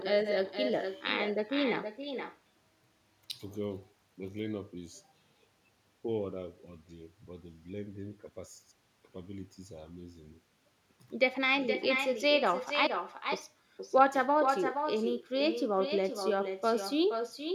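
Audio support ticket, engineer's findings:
Echo with no canceller, throughout. Far end on loudspeaker, mic re-captures it, no AEC removing it. Speech shadowed by thinner copy about 6 dB down, roughly half a second behind, after the network round trip.

Audio dropout to a faint residue, 12.87–13.32 s, 0.44 s lost. Signal cuts abruptly and path stays live: gap holds only hiss, roughly 45 dB below speech. Likely an upstream capture or transport interruption, not a pause or fade.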